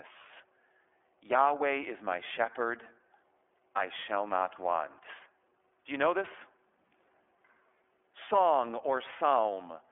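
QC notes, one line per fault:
Throughout: iLBC codec. The speech sounds thin, boxed-in and slightly rough, with a synthetic graininess and no air or sibilant sparkle, since nothing above about 3.6 kHz survives and the low end is gone below roughly 300 Hz. The damage is plainly audible. The roughness comes from each 30 ms frame's excitation being coded on its own without leaning on the previous frame, which fits iLBC's lower-rate mode at around 13.3 kbps.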